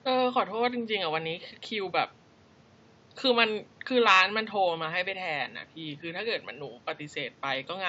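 There are no technical faults to describe in time order, only faint room noise sitting about 30 dB below the speech.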